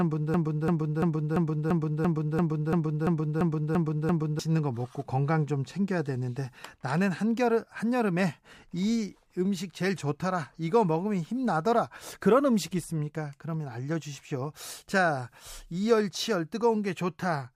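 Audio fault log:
0.00–4.39 s, broken-record loop: the player or stream likely stalled and kept resending its last held fragment, so a 0.34 s slice of speech repeats exactly, back to back, 12 times, already under way when the clip begins, and the speech due then is lost.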